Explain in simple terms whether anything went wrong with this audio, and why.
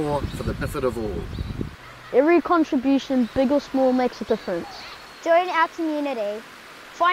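Two brief glitches interrupt the sound, at 0.58–0.62 s and 4.23–4.25 s. This is damaged data in a compressed stream: corrupted bytes make the decoder misread those frames.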